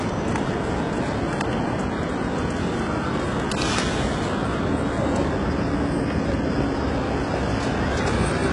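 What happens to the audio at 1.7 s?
At 1.7 s, as throughout, the audio was likely squeezed through heavy HE-AAC compression at a rate fitting about 12 kbps. Its treble is rebuilt from lower bands, turning gritty and metallic, with nothing above 11.1 kHz.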